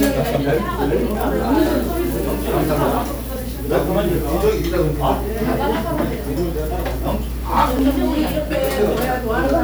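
Sounds, with a regular click about every 2.2 s from 1.15 to 7.79 s, likely clock drift buffer slips where a few hundred ppm of mismatch drops or repeats small sample blocks.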